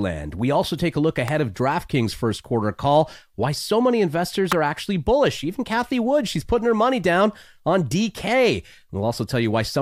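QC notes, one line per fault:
1.28 s and 4.52 s, electrical switching spike: a sharp snap sits on top of the speech at each point, the first just after "also take a look" and peaking at roughly -10 dBFS, the second between "why so many investors" and "are actually bullish" and louder, near -5 dBFS. Each is a brief arc transient, most likely from a nearby switch, motor or static discharge coupling into the audio line, so it adds a click unrelated to the speech.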